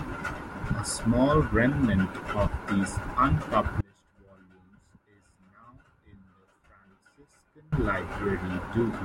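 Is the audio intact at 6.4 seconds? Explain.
No. At 6.4 seconds the speech sits inside an audio dropout to a faint residue running from 3.81 to 7.72 s, about 3.9 s in all. The signal cuts out abruptly and returns just as suddenly, leaving only a faint leak of the sound, roughly 30 dB down, most likely from the source being lost while the path after the break stayed live. On a waveform the envelope collapses to a thin band with square edges, and a spectrogram shows a sharply bounded, nearly empty block.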